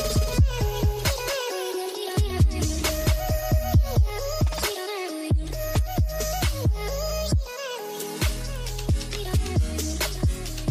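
From the first moment until 4.1 s the sound carries a doubled audio track: a second full-band copy trails by about a fifth of a second, a few decibels quieter, with no reverberant tail. It stops abruptly at 4.1 s. The likely cause is a slower second capture path mixed back in.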